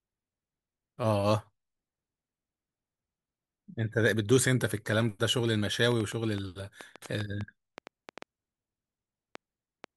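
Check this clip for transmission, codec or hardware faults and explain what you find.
One hardware-type fault is present in the second half of the speech.

A train of clicks runs from 5.92 s to 9.85 s. About fifteen similar pulses arrive at roughly 3.8 per second, spaced irregularly. The likely cause is interference from nearby equipment or a faulty connection or power supply repeatedly injecting a sharp spike into the signal path. The clicks peak around 10 dB above the speech, so they come through as distinct ticking or popping over the voice and in the pauses between phrases.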